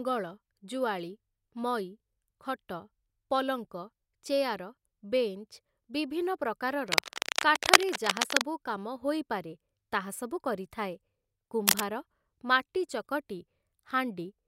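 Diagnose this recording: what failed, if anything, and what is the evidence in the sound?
Bursts of dense, uneven scratching ride over the speech from 6.88 to 8.42 s and again briefly from 11.67 to 11.83 s, slightly louder than the speech itself. This is cable scratch noise in the analogue wiring, likely a worn lead or connector moving, its contact resistance jumping rapidly.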